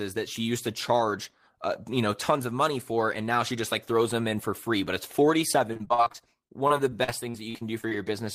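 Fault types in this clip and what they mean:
repeated packet loss (robotic sound): From about 5.73 to 7.93 s the speech keeps breaking up as packets go missing in quick succession, each hole patched by stretching the sound just before it. Roughly a fifth of that stretch is filled-in sound, the longest hole about 42 ms, giving a choppy texture. Unlike a single dropout or one long concealed gap, the damage here is many short holes recurring close together across a sustained stretch.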